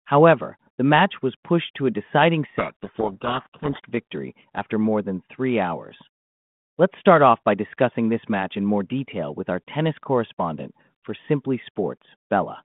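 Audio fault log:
2.58–3.9 s, codec payload misread, after "pushed to a deciding": G.726 code words unpacked in reversed bit order bury the speech in harsh distortion.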